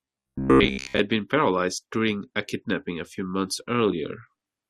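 From about 0.02 to 0.99 s the speech goes robotic from repeated short buffers, likely a starved stream looping roughly 15 ms chunks, leaving a rigid metallic buzz near 66.8 Hz.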